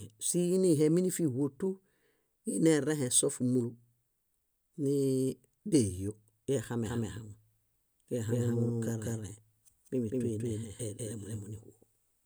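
Doubled audio track from 6.86 s to the end: an equally loud, dry copy trails by roughly 200 ms, likely captured through a slower path, and cuts in abruptly.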